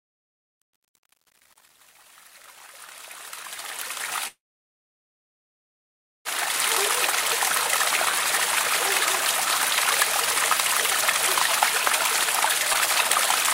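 From 0 to 6.72 s the fade-in shows truncation distortion. The volume stage keeps only about 9 bits with no dither, so the quiet start, worst up to 6.29 s, turns gritty.

From 4.27 to 6.28 s there's a call audio freeze. The last sound smears out, then nearly 1.9 s of silence follows, likely because the jitter buffer ran dry. Nothing is lost, but playback falls 2 s behind.

Around 12.73–12.77 s it skips ahead. Roughly a second and a half of audio is dropped and the two sides are butted together with only a tiny 11 ms fill.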